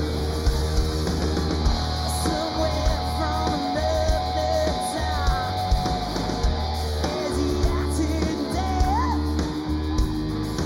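From start to finish the audio carries channel delay (comb filtering): one channel trails the other by roughly 0.2 ms, and summing them to mono cancels regularly spaced frequencies, the first notch falling around 3 kHz. The result is a hollow, phasey sound with fixed notches.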